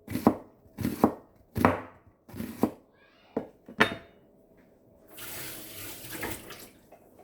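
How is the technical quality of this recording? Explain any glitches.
Nothing technical gets in the way here; the sound comes through steady and intact, with no glitches to explain.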